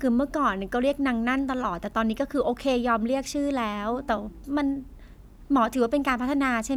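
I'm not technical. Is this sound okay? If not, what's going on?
Yes, this one's fine: nothing in the recording stands out as a problem, so there's nothing here to worry about.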